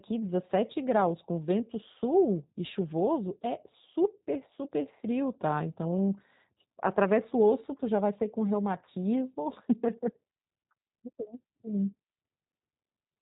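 Speech coded with G.729 at 8 kbit/s throughout, with plainly audible damage: the voice is rebuilt from a filter, pitch predictor and sparse pulses, so it sounds rough and slightly synthetic. A spectrogram shows nothing above 4 kHz, and harmonics look smeared. From 11.24 to 11.32 s there is VoIP packet loss concealed by the speech codec. About 20 ms of audio is missing, which fits a single lost packet. The decoder extends the last pitch and filter into a buzzy tone or coloured noise that fades, and the voice stays weakened until recovery. On a waveform this appears as a dip in level.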